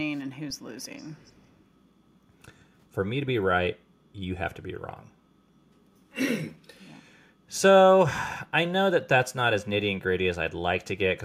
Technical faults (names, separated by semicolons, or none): echo leak